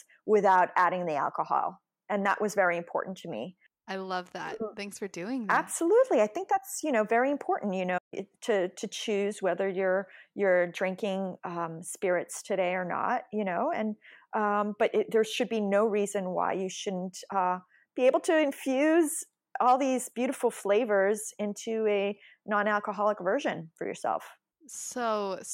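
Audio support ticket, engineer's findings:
Playback stall at 7.97 s: speech cuts out mid-flow and stays silent until 8.14 s, a gap of about 144 ms, then carries on. Likely cause is the player side: buffer ran dry or the audio thread got blocked, so output sat silent until it recovered. Worth a look at buffer depth and thread scheduling on that box.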